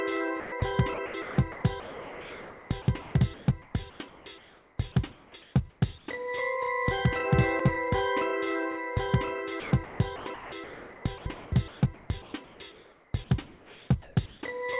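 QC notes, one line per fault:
0.4–0.62 s, 0.94–4.78 s and 9.6–13.14 s, sound chopped by the voice detector: the sender's voice detector likely toggled transmission repeatedly, so about 140 ms, 2.42 s and 2.22 s of sound became comfort noise. The result is choppy, with holes in the sound.
5.12–6.08 s and 13.46–14.42 s, comfort noise in place of the background: transmission likely paused during detected silence, and the receiver filled 560 ms and 740 ms with steady, featureless synthetic noise instead of the real background.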